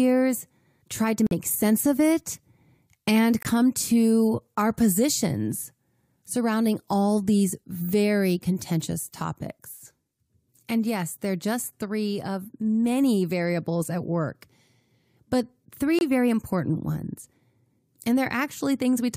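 Corrupt frame muted at 1.27 to 1.33 s, between "tried to" and "sense of it", again at 3.42 to 3.46 s just before "to our positions surrounding", and at 15.99 to 16.02 s ahead of "very important ones". Damaged compressed frames failed decoding and were replaced with silence, so the speech drops out abruptly while timing holds. The first two gaps, about 60 ms and 38 ms, fit two lost frames. The last, about 36 ms, fits one.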